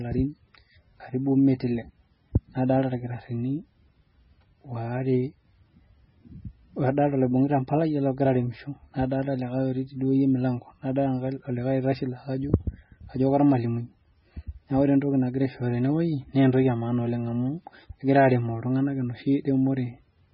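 Throughout the speech, nothing is present above 5.6 kHz, and heavy watery, swirling artefacts come from weak spectral lines switching on and off between frames. This is likely MP3 compression, and the damage fits a very low bitrate near 16 kbps.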